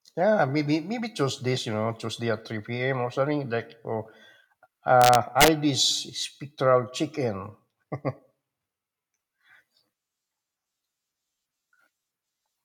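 A speech recording with a burst of integer overflow from 5.02 to 5.48 s, where the signal was pushed about 3 dB past full scale and the loudest peaks wrapped around to the opposite extreme instead of being held at the limit. Each wrap is heard as a harsh crack, far sharper than clipping. On the waveform, peaks jump from the top rail straight to the bottom; the spectrogram shows bright full-band vertical streaks.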